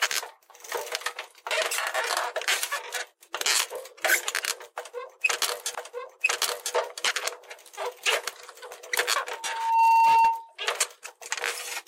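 At 5.74 s a small blip marks a jump back, and the preceding stretch of sound plays again through 6.74 s, adding 1.0 s to the timeline. This is a stream segment repeated: the player fetched or queued the same chunk twice and played both copies back to back.

From 9.28 s to 10.56 s a steady tone at 910 Hz swells over about half a second until it sits roughly 10 dB above the surrounding sound. This is a loudspeaker feedback squeal: a microphone picked up the loudspeaker it was feeding, and at 910 Hz the loop gain exceeded one, so that frequency kept reinforcing itself.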